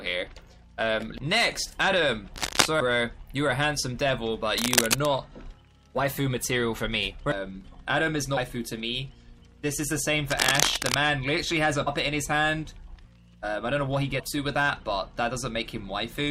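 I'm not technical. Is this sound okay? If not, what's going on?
No, there are two problems.

The first is cable scratch noise. There are three bursts of scratchy, rustling noise sitting on top of the sound, at 2.36 to 2.66 s, 4.55 to 5.08 s, and 10.30 to 10.94 s. The first is a bit louder than the audio itself, and the other two are about as loud. The likely cause is a worn cable, plug or knob being moved, so the electrical contact flickers and spits out that crackly noise.

The second is compressed frames skipped. At 11.86 s and again at about 14.19 to 14.21 s, the audio suddenly jumps ahead. Roughly 0.15 of a second goes missing the first time and about a fifth of a second the second time. These files are stored in small chunks, and the jump sizes fit chunks about 21 ms long. When some of those chunks are lost or rejected as damaged, playback skips over them.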